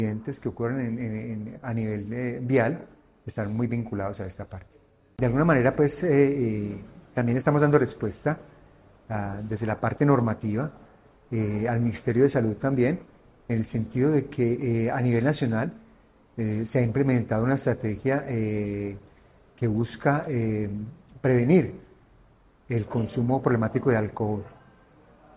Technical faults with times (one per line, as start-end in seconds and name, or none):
none